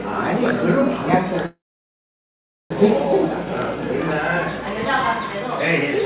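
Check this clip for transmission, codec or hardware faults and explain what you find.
One transmission fault is present, in audio carried over a narrowband call path whose content stops at 4 kHz, consistent with G.711 A-law at 64 kbps.

From 1.46 to 2.72 s there is a call audio freeze, likely caused by packets stalling in transit until the jitter buffer ran dry. The receiver stretches the last sound into a short fading buzz or hiss, then holds about 1.1 s of silence before the sound resumes exactly where it stopped. That inserts a gap of roughly 1.2 s while losing nothing.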